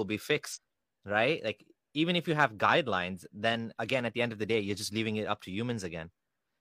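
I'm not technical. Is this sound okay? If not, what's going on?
No. Around 0.51 to 0.58 s, the player dropped a few pieces of the compressed audio (compressed frames skipped), about five frames of roughly 46 ms each. The speech jumps ahead by about a fifth of a second.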